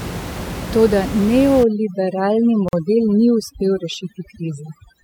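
Overdone noise removal affects this speech recording from 1.63 s to the end. Over-aggressive noise reduction pushes individual frequency bands down or off whenever they sit near its noise estimate, so the room noise, about 10 dB below the speech, collapses into near silence with twinkling specks, and quieter components of the voice are removed too. A gap at a join of encoded pieces opens at 2.69 s and lasts about 46 ms. Separately encoded segments, here about 6 s long, were joined untrimmed, leaving the encoder's start-up delay and end padding in place. Continuous sound drops abruptly to silence, with smeared edges, then resumes where it stopped.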